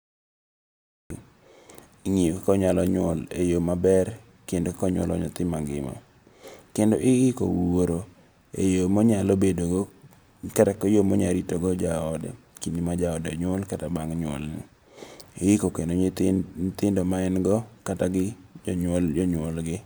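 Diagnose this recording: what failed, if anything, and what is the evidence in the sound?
Capture began late, a cut-off start at the driver or buffer stage: the stream opened after the talker was already speaking. The clip holds digital silence from 0 to 1.10 s, then speech enters abruptly mid-sound at 1.10 s, with no natural onset or fade.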